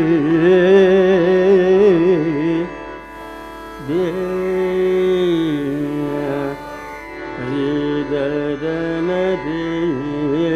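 At 2.93 s the receiver loses the digital stream and cross-fades over about 284 ms to the FM analogue feed: digital radio blending to analogue. Level drops about 1 dB and hiss appears roughly 35 dB down, until it blends back at 7.23 s.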